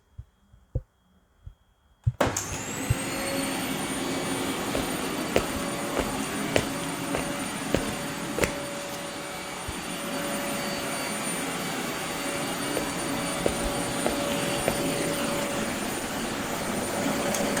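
At 14.82 s the adaptive stream drops to a lower bitrate until the end. The quality changes suddenly, with no gap. Codec artefacts rise, which fits a fall from about 64 to 16 kbit/s Opus.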